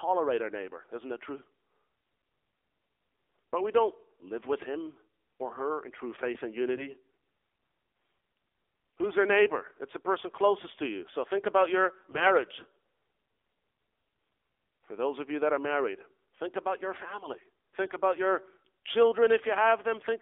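Throughout, the speech carries the AMR narrowband mobile codec. The band runs only from about 300 Hz to 3.5 kHz. The buzzy, synthetic vocal-tract modelling is plainly audible, which fits a low mode near 7.4 kbps. Unlike simple band-limiting, the coarseness comes from the codec itself.

AMR bit errors strike three times: 6.74 to 6.89 s after "in true faith and", 12.09 to 12.34 s after "think about your", and 17.83 to 17.96 s after "think about your family". Corrupted low-priority bits misplace the excitation pulses, so the voice turns hoarse and gargly. Unlike frame loss, pitch and level carry on with no gap or muting.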